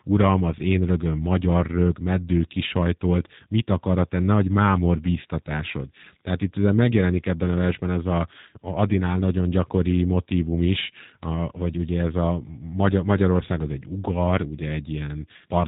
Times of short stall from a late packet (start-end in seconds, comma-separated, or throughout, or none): none